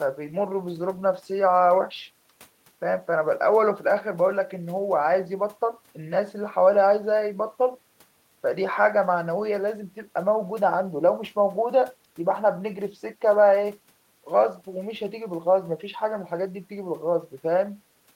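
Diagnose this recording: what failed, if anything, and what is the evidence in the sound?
Nothing in this speech recording points to a failure at any stage of the chain. No event in the sound gives evidence for a diagnosis.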